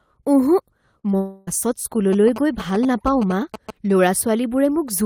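A speech recording with network trouble early on and radio interference in the middle. At 0.99 s and again at 1.11 s there's short concealed packet loss: about 40 ms and then 20 ms of audio never arrived, and the decoder papered over each gap by extending the last sound, so you hear a quick smear or wobble. Right after, from 1.17 to 1.49 s, it's a long network dropout, most likely. Roughly 300 ms of real audio is gone, and the concealment stretches the previous sound across the whole hole as a fading buzz or hiss rather than going silent, before the speech resumes further along. Then from 2.13 to 3.71 s you get GSM signalling bursts, the familiar galloping dit-dit-dit of short 217 Hz buzzes, sitting around 10 dB under the speech. That's a nearby 2G phone chattering with its network, with the audio circuitry rectifying the radio bursts.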